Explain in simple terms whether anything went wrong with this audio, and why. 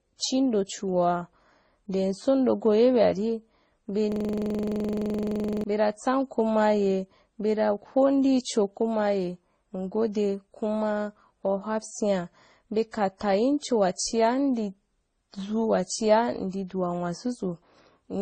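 Two things went wrong here.

The whole recording sounds dull, with nothing above about 9 kHz. Several kinds of damage are heard together, stacked on top of each other. That's most likely transcoding between lossy codecs. The speech was squeezed by one compressed format and then re-squeezed by another, and another after that. Each pass adds its own artefacts and keeps the earlier ones, and the dullest pass sets the ceiling.

Then, from 4.12 to 5.64 s, there's a system hang loop. The computer froze, but the sound hardware kept replaying the same tiny chunk over and over. That chunk is 42.67 ms long, which fits a 2048-sample buffer, and it repeats about 23 times a second, 36 times in all.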